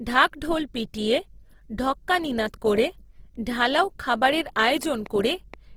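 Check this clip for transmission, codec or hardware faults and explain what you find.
Two faults are audible: codec damage across the whole speech clip and a short burst of clicks near the end.

Opus compression: throughout, the likely cause is low-bitrate Opus in music (CELT) mode, around 16 kbps. It fills starved bands with folded or noisy content, so the speech sounds grainy and rough while keeping full bandwidth.

Train of clicks: from 4.59 to 5.55 s, just after "ঢালাও খাবারের", likely interference or a faulty connection injects about five similar pulses at a regular 4.2 per second. They are heard as ticking, peaking about 5 dB above the speech.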